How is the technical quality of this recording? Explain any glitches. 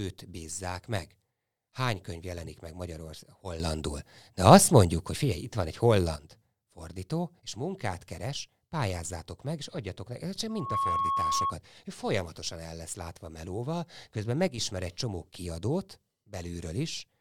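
The recording has two kinds of glitch: abrupt level steps in the speech and a short feedback howl.

Sudden gain jump, 3.6 to 6.16 s and 14.48 to 14.58 s: the speech and its background noise leap together, up about 10 dB in the first span and down about 8 dB in the second. The likely cause is a gain change applied instantly, with no ramp.

Loudspeaker feedback squeal, 10.49 to 11.55 s: the microphone is picking up its own loudspeaker, and at 1.1 kHz the loop's gain exceeds one. That single tone swells within about a third of a second to roughly 5 dB above the speech.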